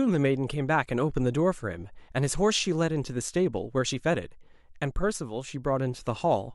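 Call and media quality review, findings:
No audible faults found in this speech clip; nothing to attribute to capture, transport or playback.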